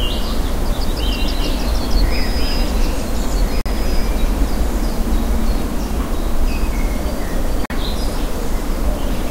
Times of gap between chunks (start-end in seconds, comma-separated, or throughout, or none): 3.61-3.66, 7.66-7.70